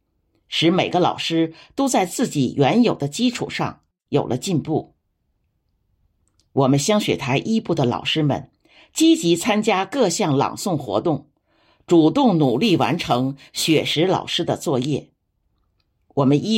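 Crude rate conversion affects this speech clip from 12.43 to 13.93 s, where a gritty, inharmonic fizz rides on the louder and brighter parts of the speech. The samples were picked by nearest position rather than filtered, so the timing error repeats in a fixed pattern and creates tones unrelated to the speech, sitting only about 25 dB below it. The pattern fits a conversion from 48 kHz down to 44.1 kHz.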